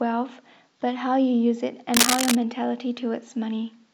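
A speech clip with cable scratch noise from 1.94 to 2.36 s: a rustling, scratchy burst about as loud as the speech, likely from a worn cable or connector being moved. A spectrogram would show dense, broadband vertical smears, the waveform ragged, irregular spikes.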